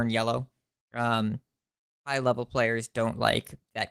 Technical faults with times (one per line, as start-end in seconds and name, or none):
none